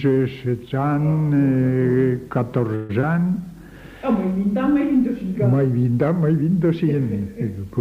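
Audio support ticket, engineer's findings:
2.75–2.91 s: sound stretches into a fading buzz-or-hiss tail for about 140 ms, then resumes where it stopped, with nothing audibly lost. Likely call audio freeze: late packets drained the jitter buffer, receiver extended the last sound, and delay grew by about 140 ms.

3.01–3.05 s: brief smear, with about 40 ms of audio gone and a short synthetic fill blended back in. Short concealed packet loss at the decoder; buffer also dropped roughly 30 ms of delay.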